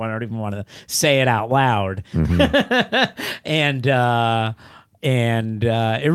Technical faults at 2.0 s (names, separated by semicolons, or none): none